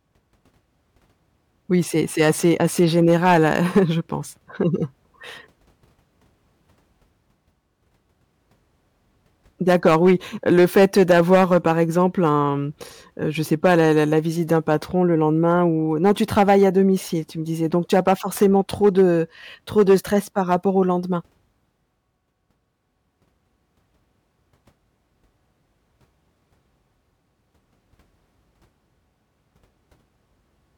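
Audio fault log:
2.2–3.79 s, 9.69–12.36 s (ending just before "mmh heu je"), 13.52–14.74 s, 16.05–16.67 s, 17.93–19.03 s, 19.78–20.55 s: hard clipping. The speech drove a stage about 4 to 9 dB past its limit. The peaks were cut flat, and the flat tops add high harmonics that are heard as crackle on peaks, worst in the 9.69 s stretch.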